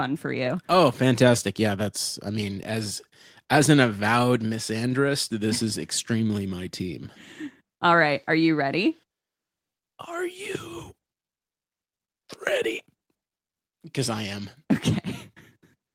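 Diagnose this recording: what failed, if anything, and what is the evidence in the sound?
Listening closely to the speech turned up nothing that points to a failure at any stage of the chain.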